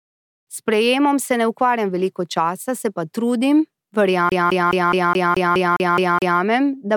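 From 4.29 to 6.40 s the speech is CD stuck on one turn: a 210 ms slice repeats ten times with brief mutes, before "da bom pri" resumes.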